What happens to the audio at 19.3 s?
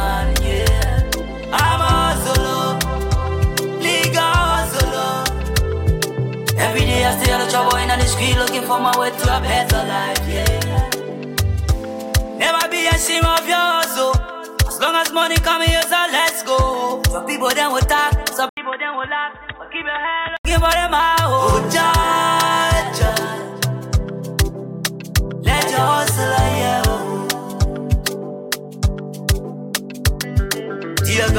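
From 18.49 s to 20.45 s the sound turns dull and boxy, with nothing above 3.8 kHz, and it drops noticeably in level, by around 10 dB. An 80 ms gap of silence marks the change, and a faint new background noise sits well under the signal. This is likely an input switched to a poorer device, such as a headset in call mode, whose narrow band, own tone and own noise replace the original microphone's.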